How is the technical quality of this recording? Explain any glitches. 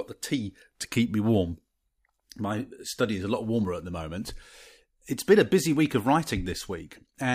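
No technical faults can be heard in this recording.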